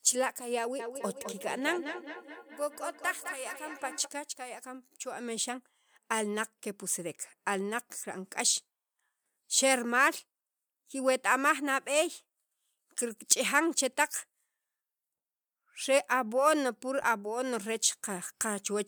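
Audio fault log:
0.79–4.14 s, feedback echo between two devices. The speech returns at a steady interval of about a fifth of a second, peaking at about -12 dB below the voice. A second device in the room replays this microphone's signal, which is picked up again, and neither echo canceller removes the other device's output.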